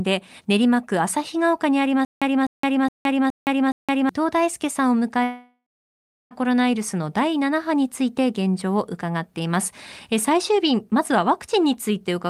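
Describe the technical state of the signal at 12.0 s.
At 12.0 s the signal is intact, with no audible fault at that moment.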